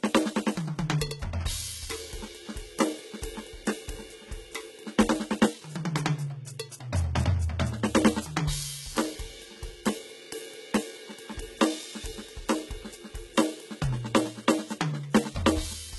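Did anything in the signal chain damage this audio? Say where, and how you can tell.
Yes, at the codec stage, throughout the music. Nothing survives above 11.8 kHz, and the treble below that sounds rebuilt rather than original. The damage is heavy. Likely HE-AAC compression: lower bands are copied upward under a coarse envelope, which fits a bitrate near 16 kbps.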